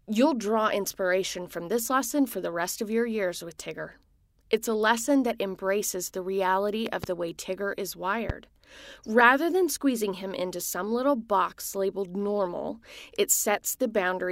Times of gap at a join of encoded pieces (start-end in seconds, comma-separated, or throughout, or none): none